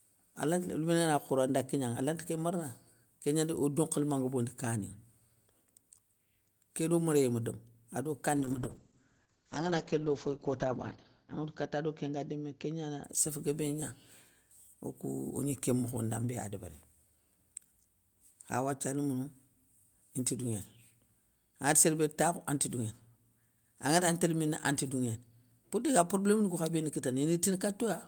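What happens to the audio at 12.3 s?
At 12.3 s the speech sounds muffled and rough, with a watery smear and no top end above 8 kHz. This is a call bitrate drop running from 8.37 s, just after "méréyé ma domou ado", to 13.09 s. The call's bandwidth estimate fell and the encoder coded far more coarsely, consistent with a drop from around 32 to 8 kbps. The lowest quality lasts about 2.3 s before the bitrate recovers.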